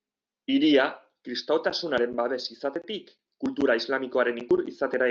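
Nothing stood out on listening to this speech recording, which came through an ordinary call connection.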